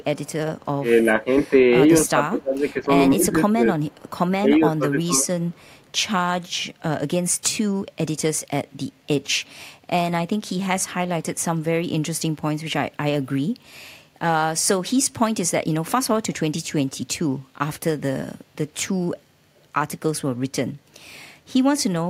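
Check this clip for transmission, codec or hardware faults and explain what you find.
Two kinds of fault run through the opening six seconds of this speech: echo leak and speech suppressed in double talk, both pointing to an echo canceller struggling on the loudspeaker side.

Echo leak appears from 0.0 to 0.65 s, 3.8 to 4.11 s and 5.4 to 5.9 s. A faint delayed copy of the speech trails the original by 227 ms, sitting very low, roughly 35 to 40 dB down. The likely cause is a loudspeaker on one side feeding its microphone, with the canceller failing to remove all of it. The fixed 227 ms delay sets it apart from room reverberation, which smears continuously rather than repeating at a constant lag.

Speech suppressed in double talk occurs at 2.06 to 2.62 s, 3.15 to 3.65 s and 4.43 to 5.25 s. The voice dips sharply, by roughly 10 to 20 dB at worst, for a few hundred milliseconds at a time. This is likely the canceller clamping down while both sides spoke, because it could not separate its own talker from the returning echo. 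Unlike packet loss dropouts, these are level dips tied to overlapping talk.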